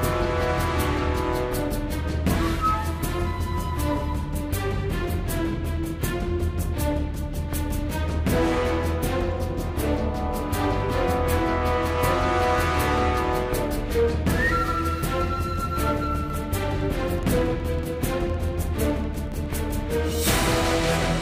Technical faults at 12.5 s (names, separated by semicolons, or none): none